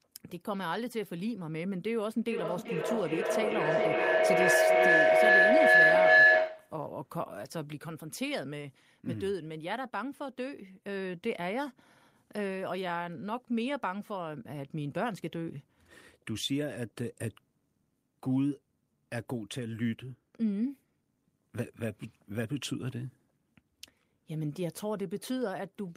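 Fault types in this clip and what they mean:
Feedback howl: from 2.3 to 6.86 s a microphone-loudspeaker loop keeps gaining, building to a tone around 1.5 kHz, about 12 dB above the speech, pulsing roughly every 400 ms.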